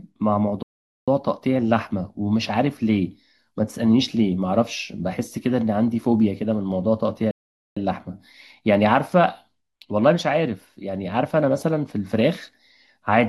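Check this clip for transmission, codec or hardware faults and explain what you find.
Two short dropouts in the speech, both playback stalls. At 0.63 s and again at 7.31 s the audio goes silent for about 0.45 s, then picks up, likely because the player briefly ran out of buffered data.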